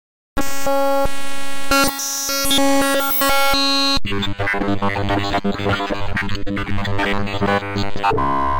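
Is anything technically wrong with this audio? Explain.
No technical faults are audible.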